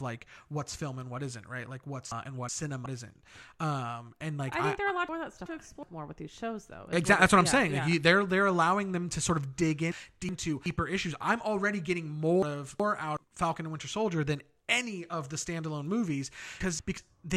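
Frames out of order at 2.12–2.86, 5.09–5.83 s (after "I they're allowed"), 9.92–10.66, 12.43–13.17 and 16.60–16.98 s. Two adjacent 371.5 ms blocks (185.8 ms in the last) play swapped, giving a garbled flutter. No time is lost.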